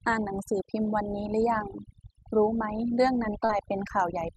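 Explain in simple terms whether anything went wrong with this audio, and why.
Overdone noise removal runs through the whole clip. A noise-cleaning tool was set too strong, so it switched off slices of sound it mistook for background hiss, taking quiet parts of the speech too. The background drops and breaks up into twinkling specks.

Short concealed packet loss occurs from 3.45 to 3.51 s. About 40 milliseconds of the call arrived too late, so the receiver patched the gap by stretching the sound just before it, then blended back in. It comes across as a brief smear or wobble.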